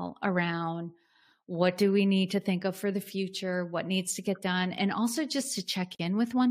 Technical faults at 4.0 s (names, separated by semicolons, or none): none